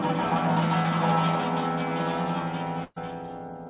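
At 2.84 s a burst of packet loss begins and runs to 2.98 s. Around 120 ms of audio never arrived in time, so the receiver stretched the last sound it had into that gap, fading it as it went, then resumed with those 120 ms skipped and about 10 ms of true silence at the seam. On a spectrogram the fill appears as smeared, repeating bands decaying in level, with a thin blank sliver before normal detail returns. In the waveform it shows as a shrinking, regular stretch. The band-limit to 4 kHz throughout fits a G.711 A-law call path at 64 kbps.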